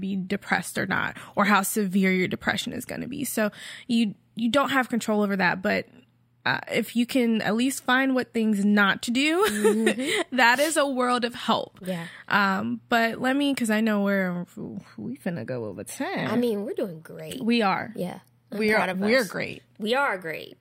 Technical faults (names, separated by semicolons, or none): none